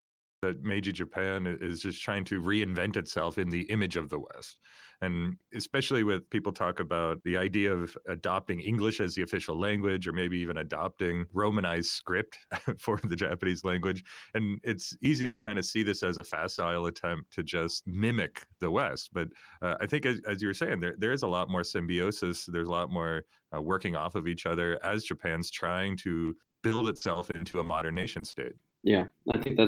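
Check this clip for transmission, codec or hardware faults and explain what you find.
Four kinds of fault are present: a cut-off start, several short concealed packet losses, a long network dropout, and a stretch of repeated packet loss that turns the speech robotic near the end.

Cut-off start, 0 to 0.43 s. The recording began after the speaker was already talking, so the first 0.43 s is digital silence and the speech then switches on abruptly mid-sound at 0.43 s. Because capture started late rather than the speaker starting fresh, there is no natural onset or fade-in. The speech simply appears, cut into partway through a sound.

Short concealed packet loss at 15.21 s, 16.17 s and 16.29 s. Each time, about 20 ms of the call failed to reach the decoder in time. The receiver covered each hole by extending the preceding sound, carrying on its pitch where it was voiced or substituting shaped noise where it wasn't, then crossfaded back into the real signal. 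Each event is brief, heard as a small smear or wobble in the speech.

Long network dropout, 15.25 to 15.49 s, directly after the first short loss. For about 220 ms no real audio was played. The gap is continuous patched sound rather than silence: the last sound is stretched into a fading buzz or hiss, and the speech resumes at 15.49 s with that portion missing. The likely cause is a lengthy interruption in packet arrival, longer than the receiver's buffer could ride out.

Repeated packet loss (robotic sound), 26.25 to 29.51 s. Over these roughly 3.3 s, packets went missing 28 times, each gap at most 40 ms, adding up to about 600 ms, close to a fifth of the span. Each hole is patched by extending the previous sound, and another one follows soon after. The speech becomes choppy, with fragments missing, right up to just before the end.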